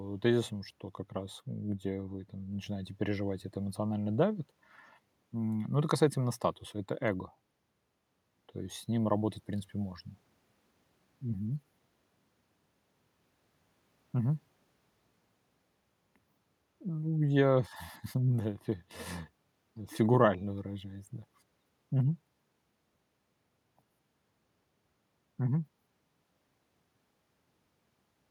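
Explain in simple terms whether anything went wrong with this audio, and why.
Nothing went wrong here: the recorded speech keeps a steady, continuous signal, with no gaps, jumps or sudden changes in level anywhere in the clip.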